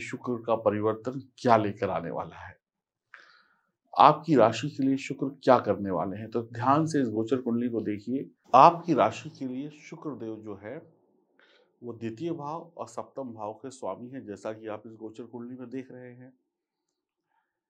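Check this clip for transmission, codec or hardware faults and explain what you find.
One fault is audible: zipper noise from 8.77 to 9.72 s, where the level drops roughly 10 dB in unsmoothed 1 dB steps, about fifteen per second, each stepping click producing a ticking zip.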